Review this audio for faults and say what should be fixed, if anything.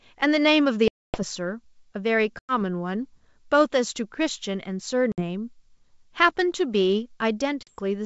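Packet loss on an ADPCM call cuts four hard-edged holes into the speech: 0.88 to 1.24 s, 2.39 to 2.54 s, 5.12 to 5.23 s and 7.63 to 7.70 s. The missing stretches are 260, 100, 60 and 40 ms. Each is filled with silence. Afterwards the decoder's predictor and step size no longer match the sender's. The speech returns with slight distortion. It settles within tens of milliseconds. The G.722 wideband band-splitting stays clear around the gaps.

To prevent this, add packet loss concealment with decoder state resynchronisation, and protect the link with a jitter buffer and redundant packets.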